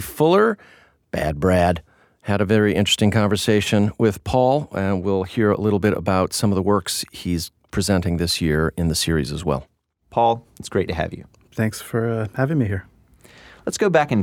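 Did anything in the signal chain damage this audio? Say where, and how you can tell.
No, nothing along the signal chain has left any audible damage on this speech recording, and the signal holds steady throughout without dropouts, distortion or timing disturbances.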